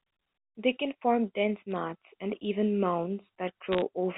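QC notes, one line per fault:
1.72–1.76 s, bit errors on a digital phone line: a brief burst of errors where flipped bits each changed a single sample.
3.72–3.82 s, bit errors on a digital phone line: a longer, denser crackle, at roughly half a percent of bits corrupted, laid over the band-limited G.711 telephone sound.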